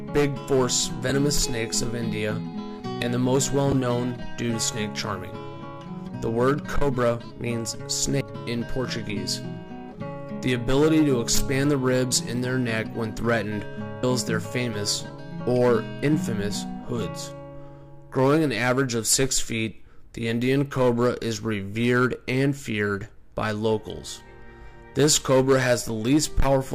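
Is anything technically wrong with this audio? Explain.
Yes: damaged data in a compressed stream at 1.09, 3.72, 8.21 and 14.03 s. The decoder misreads corrupt frames and resyncs, producing brief chirps, squawks, clicks or short holes, seen as thin broadband spectrogram streaks and waveform glitches.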